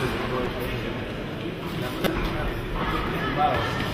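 Corrupt frame decoded at 0.45 s (about one frame) and 2.04 to 2.07 s (about three frames, louder). Damaged data put energy at wrong frequencies, unlike a dropout's silence or a concealed gap.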